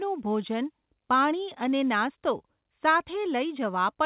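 No technical faults are audible.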